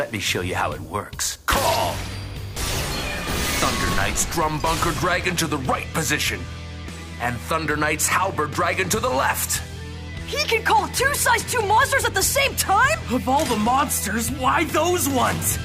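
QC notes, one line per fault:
Nothing to flag here; it all sounds the way it should, so there's no fault to log.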